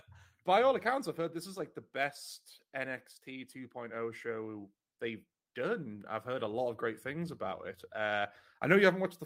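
At 1.57 to 1.63 s, between "I've heard this is" and "the best", packets were lost and rebuilt from error correction: the decoder played low-bitrate copies carried in later packets. About 40 ms, fitting two packets, comes out rougher and noisier, with no gap.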